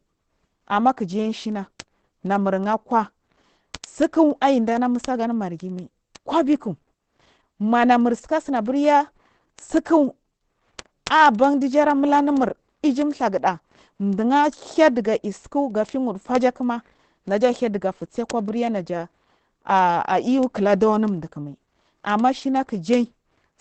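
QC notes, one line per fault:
throughout: Opus compression, heavily muffled, hoarse speech under a flat spectrogram ceiling at 8.4 kHz, likely SILK speech-mode encoding at a rate fitting 12 kbps.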